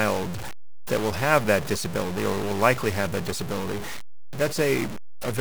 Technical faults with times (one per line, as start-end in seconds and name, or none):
0.00-5.40 stuck bit